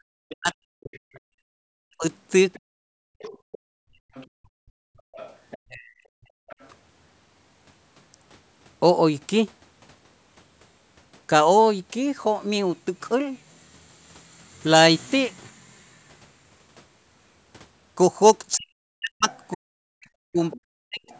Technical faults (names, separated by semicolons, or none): background gated by the echo canceller; other side's voice leaking through; speech suppressed in double talk